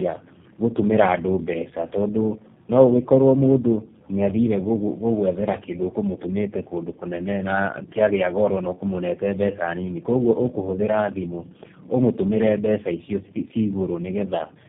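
From start to finish the speech carries tandem speech coding: it passed through three low-rate speech codecs in a row, AMR-NB at 5.9 kbit/s, GSM full rate at 13 kbit/s and finally G.729A at 8 kbit/s, with G.711 mu-law links between them. Each coder re-models speech that the previous one already mangled, so the errors stack. The result sounds rough, muffled and warbly, with nothing above 3.4 kHz.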